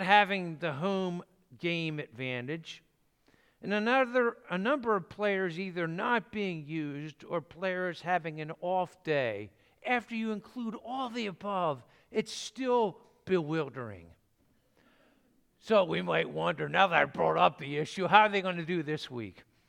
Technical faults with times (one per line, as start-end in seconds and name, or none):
none